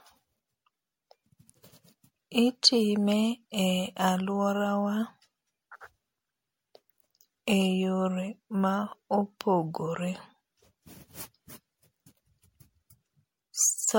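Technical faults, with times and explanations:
Throughout, generation loss: the speech has likely passed through an MP3 encoder about seven times in succession, at a rate that sounds near 64 kbit/s. Each pass requantises on a fresh frame grid, so the losses pile up. The result is a swirly, hollow and smeared quality and consonant attacks that blur, harsher than a single encode at that rate would produce, with nothing above 16.5 kHz.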